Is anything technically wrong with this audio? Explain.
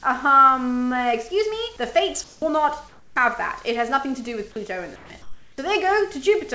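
Yes. Two related faults occur during pauses.

Comfort noise in place of the background at 2.24–2.42 s, 2.88–3.16 s, 4.96–5.10 s and 5.22–5.58 s: the real background becomes a steady, featureless hiss, about 12, 3, 3 and 7 dB quieter respectively. The likely cause is discontinuous transmission, with the receiver synthesising noise while the sender is silent.

Onset clipped by the voice detector at 2.36–2.42 s (60 ms) and 5.56–5.58 s (20 ms): the returning sound begins abruptly, with its soft beginning missing and comfort noise in its place. This is likely a voice detector that was slow to register the sound restarting.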